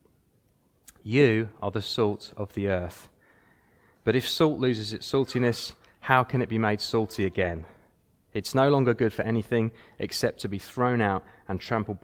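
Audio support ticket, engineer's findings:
Brief roughened, grainy patch, no dropout, at 1.11–1.13 s, about 20 ms. Lost packet rebuilt from error correction: the Opus decoder played the low-bitrate in-band FEC copy carried in the next packet, so continuity held but quality dipped.

Longer noisy, coarse stretch at 7.43–7.61 s, about 100 ms, fits several separate lost packets. Same mechanism: the jitter buffer/decoder substituted reduced-bitrate FEC copies for each missing frame, so there was no silence, only audible degradation.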